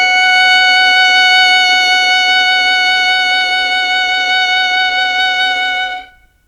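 A music clip with two timing faults. From 2.79 to 3.64 s there are repeated stalls (stutter): packets arrived late, the jitter buffer ran dry nine times, and the receiver extended the last sound, about 94 ms in total with the longest fill 15 ms and nothing lost. On a spectrogram, short frozen, smeared columns interrupt the music. Then from 4.38 to 5.50 s comes a jitter buffer slow-down, which plays at 89% speed and adds 136 ms by repeating single pitch periods to rebuild reserve. Pitch stays put while the passage drags, and the waveform shows stretched, near-identical repeated cycles.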